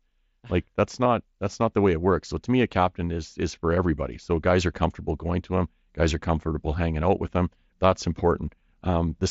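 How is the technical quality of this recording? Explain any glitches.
The recording is speech carried over a Bluetooth headset link using the mSBC codec, which limits the audio to 8 kHz and adds light coding damage. There is one glitch.

At about 1.04 s there is concealed Bluetooth headset packet loss lasting 15 ms, which fits two lost voice frames. When packets between headset and phone fail to arrive, the receiver fills the gap by repeating the stretch of recent waveform that best matches, drawn from roughly the last 20 ms. Because this gap is so short, the patch is a brief continuation of the preceding sound rather than an audible dropout.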